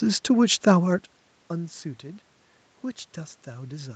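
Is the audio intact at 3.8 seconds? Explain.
Yes, the audio is intact at 3.8 seconds, with no fault at that moment.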